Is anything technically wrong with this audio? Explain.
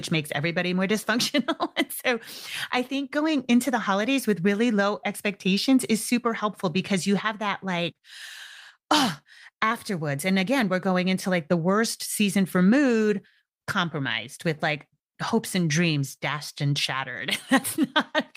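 No, nothing stood out as technically wrong when listening to this recording.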